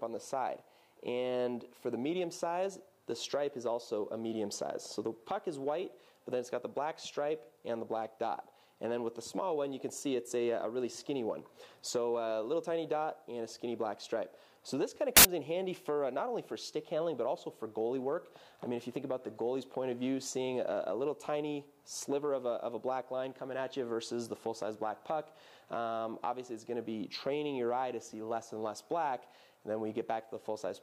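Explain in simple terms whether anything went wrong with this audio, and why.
A short burst of harsh, loud noise cuts in at about 15.17 seconds and stops at 15.25 seconds, lasting under a tenth of a second. This is samples built from the wrong bytes. For that brief stretch, the player assembled each sample out of the wrong pieces, so the tiny, rapidly changing details ended up as the main part of the sound. The result is loud, harsh noise in place of the real audio.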